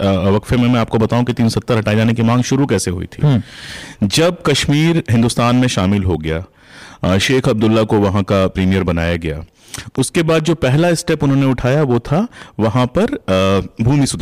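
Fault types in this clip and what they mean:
Hard clipping: The speech drives past the stage's maximum level by about 7 dB, so peaks are sliced flat throughout, with roughly a tenth of samples affected. The flattened tops add high harmonics, giving a harsh, fuzzy edge to louder syllables.
Train of clicks: From 9.95 to 12.64 s, about fifteen near-identical clicks arrive at a regular 4.48 per second, peaking roughly level with the speech and ticking through pauses as well. Likely cause is interference or a faulty connection injecting pulses.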